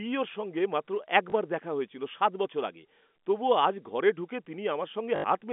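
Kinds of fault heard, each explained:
Packet loss with last packet repeated: a small blip near 1.3 s, then a robotic stutter buzzing at 50 Hz from 5.16 to 5.24 s, as the last received packet was replayed in place of lost 20 ms packets.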